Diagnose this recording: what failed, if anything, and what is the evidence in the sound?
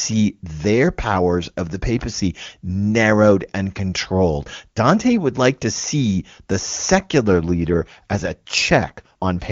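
The fault sits at the network stage, acting on the codec. It is an AMR rate drop. From 7.28 s to the end at 9.51 s, the speech turns rougher and more synthetic. The band does not narrow and there is no gap. Before that point the wideband HD Voice coding is clean, which fits the top AMR-WB rate of 23.85 kbit/s. The roughness after the drop fits a fall to about 8.85 kbit/s. A weak radio link likely made the network order the lower rate, spending bits on error protection instead of speech detail.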